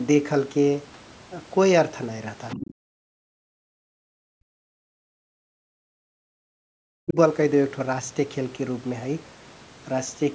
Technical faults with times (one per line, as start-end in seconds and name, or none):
2.49-2.73 other side's voice leaking through
2.73-2.91 background gated by the echo canceller
3.19-7.17 speech suppressed in double talk